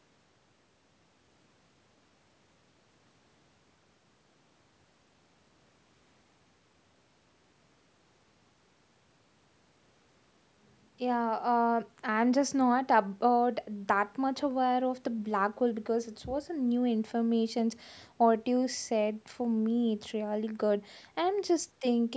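No technical faults can be heard in this speech recording.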